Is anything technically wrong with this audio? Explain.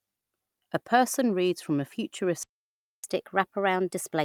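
Yes, there are two related faults.

From 2.43 s to 3.04 s the speech cuts out in mid-flow, leaving about 0.6 s of dead silence before it resumes. This is a playback stall. The likely cause is that the player ran dry of buffered data or its audio thread was held up, so the output had nothing to send until it recovered.

From 3.04 s to the end, the speech runs quick and slightly high, about 1.1 times normal speed and roughly one and a half semitones sharp. This is catch-up at higher speed: having fallen behind during the stall, the player resamples its backlog faster to regain the lost time, so speed and pitch rise together rather than independently.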